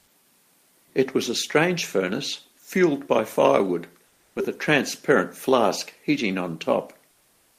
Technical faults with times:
4.07-4.35 comfort noise in place of the background

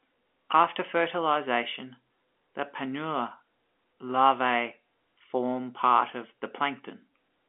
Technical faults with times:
none

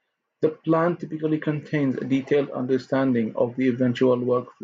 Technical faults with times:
none

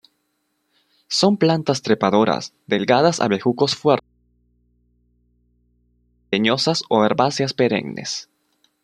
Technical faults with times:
4.00-6.32 audio dropout to a faint residue

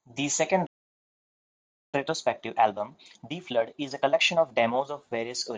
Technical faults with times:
0.67-1.94 playback stall
1.94-4.94 time-compressed catch-up

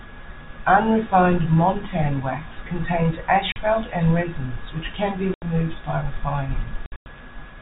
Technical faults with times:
3.52-3.56 packet loss filled with silence
5.34-5.42 packet loss filled with silence
6.86-7.06 packet loss filled with silence

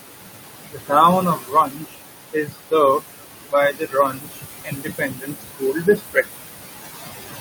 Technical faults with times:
0.00-7.40 noise suppressor artifacts
0.66-0.93 speech cut by the noise suppressor
1.21-2.01 speech cut by the noise suppressor
2.33-2.55 speech cut by the noise suppressor
3.52-6.30 speech cut by the noise suppressor

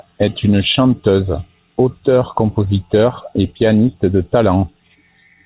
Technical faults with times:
none

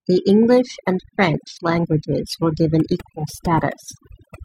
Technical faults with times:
0.00-4.44 overdone noise removal

